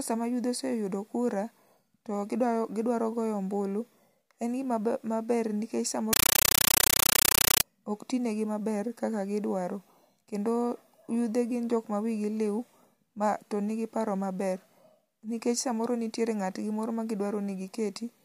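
A compressed stream played as audio takes over the speech from 6.13 to 7.63 s. The Dolby Digital data was passed through as though it were ordinary samples rather than being decoded, so each frame comes out as a 9.33 ms burst of noise followed by silence, repeating 31.25 times a second. The result is a harsh, very loud chattering static in place of the speech, which fits a 448 kbps AC-3 stream.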